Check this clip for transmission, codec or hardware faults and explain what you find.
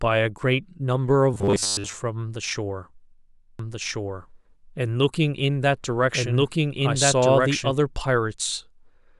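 Two faults stand out in this speech clip.

From 1.34 to 1.93 s the speech turns into a rigid, metallic buzz fixed at 100 Hz, still loosely tracing the speech. This is robotic sound from repeated short buffers. New audio likely arrived too late, so the playback side kept looping the last 10 ms chunk to fill the gap. Most of that stretch, well over half, is repeats rather than real audio, and the 10 ms loop length sets the 100 Hz pitch.

From 3.59 to 7.71 s a second copy of the speech runs about one and a half seconds behind the first, at roughly the same level, so two overlapping streams compete. This is a doubled audio track. The copy is full-band and dry, with no decay or room colour, and it cuts in and out abruptly at both ends. The likely cause is the same signal being captured twice, once through a much slower path, and both copies being mixed together.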